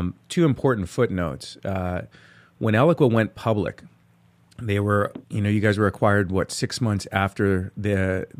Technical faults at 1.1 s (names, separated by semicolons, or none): none